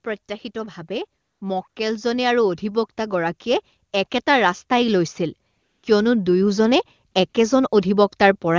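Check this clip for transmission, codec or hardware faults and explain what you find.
Two faults are audible: a slow automatic gain rise early on, and several short stretches of comfort noise replacing the real background. The wideband call path itself sounds clean, with coding damage at most faint.

From 0.53 to 3.74 s, automatic gain rising lifts the level by about 6 dB. The gain control judged the input too quiet and raised it step by step, so speech and background swell together over about three seconds. Because it is gradual and lifts everything equally, it is not a sudden level jump or a compressor pumping on loud syllables.

AMR comfort noise appears at 1.21 to 1.41 s, 1.69 to 1.75 s, 5.51 to 5.83 s, 7.11 to 7.13 s and 7.29 to 7.33 s. In these pauses the phone stopped sending speech frames, and the receiver generated smooth synthetic noise instead of the real room sound. It switches in and out. 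Its even texture sets it apart from a dropout, which would be silence, and from packet-loss concealment, which repeats fragments of speech.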